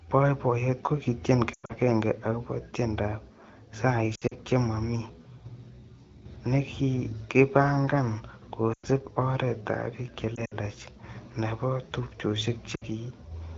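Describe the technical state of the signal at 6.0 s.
At 6.0 s the speech is intact, with no fault, and it carries only the light coding character of AMR wideband (HD Voice) at 12.65 kbit/s, the rate at which that codec keeps speech clear.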